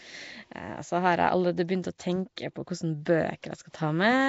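The whole clip carries a rough, hissy halo and a smeared, underwater quality, likely from Nellymoser compression, the old Flash microphone codec, at a coarseness that fits roughly 32 kbps. It codes short fixed blocks with very few bits per sample, leaving weak bands empty and filling them with noise. On a spectrogram the energy stops flat at 7.7 kHz, and below that the harmonics look patchy and blotched with speckled noise.

At 2.36 s a brief pre-echo, about 10 ms long, precedes a sharp attack. The codec spreads quantisation noise across its whole block, so noise scaled for the loud onset also lands in the quiet instant just before it. The attack is heard with a short hiss in front and a softened edge. On the waveform a low fuzzy ramp leads into the transient, and the spectrogram shows a thin broadband smear just ahead of it.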